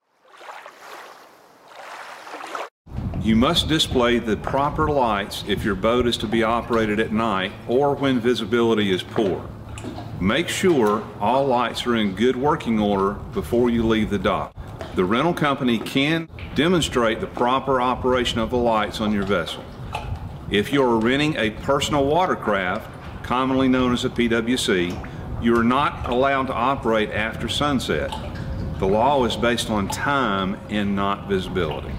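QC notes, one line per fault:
No faults to note.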